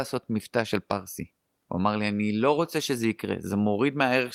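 No technical faults can be heard anywhere in the speech.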